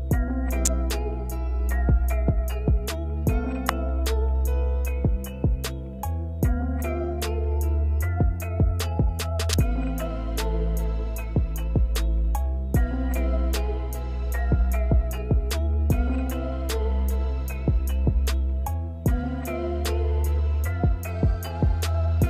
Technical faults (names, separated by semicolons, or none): electrical switching spike